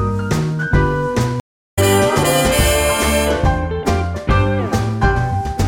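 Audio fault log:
1.40 to 1.79 s, stream reconnect: the sound drops out into about 0.37 s of silence, then picks up again at a later point, skipping roughly a fifth of a second of material. The link to the source broke, the player waited, re-established the connection and started a new decoder partway through the stream. Because the stream kept running while the player was cut off, playback rejoins ahead of where it stopped rather than continuing seamlessly.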